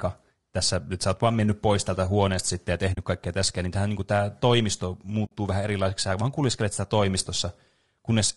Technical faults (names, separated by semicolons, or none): low-delay AAC compression; AAC frame loss with muting